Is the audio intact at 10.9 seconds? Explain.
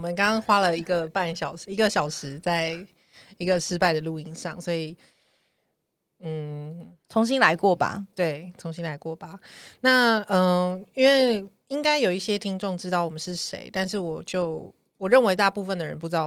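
Yes, the speech at 10.9 seconds is intact, with nothing disrupting it beyond the light coloration of the Opus voice compression carried throughout.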